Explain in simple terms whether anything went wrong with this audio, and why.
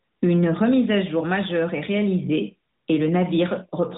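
Nothing went wrong here: listening through this bit of speech, there's no moment where the sound breaks, jumps or goes off in any way you'd notice.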